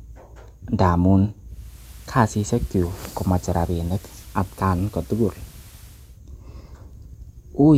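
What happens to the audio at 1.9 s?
At 1.9 s the sound is on the analogue side of a digital radio blending to analogue. The receiver lost its digital stream at 1.45 s and cross-faded over about 436 ms to the station's FM broadcast, which carries the audio until it returns to digital at 6.22 s. FM brings a steady hiss roughly 25 dB below the signal and a level about 1 dB lower.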